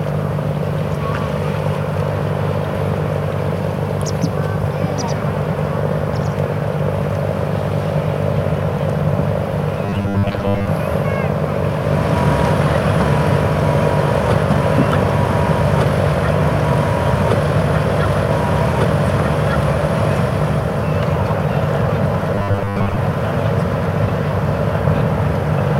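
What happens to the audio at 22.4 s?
At 22.35 s the sound collapses into a rigid, metallic buzz that lasts until 22.97 s, a case of robotic sound from repeated short buffers. The buzz sits at a fixed 100 Hz, which fits a segment of about 10 ms being replayed over and over. The likely cause is new audio arriving too slowly, so the same short chunk fills most of that span while the real audio underneath it is skipped.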